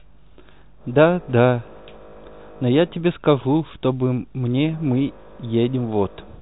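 No faults to report: the speech sits on an ordinary G.711 telephone path, band-limited at 3.9 kHz, with nothing beyond that to flag.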